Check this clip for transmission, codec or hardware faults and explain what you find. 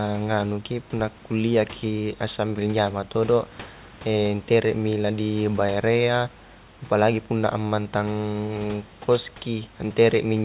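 Listening closely to the speech, nothing stood out that would point to a transmission, codec or hardware problem.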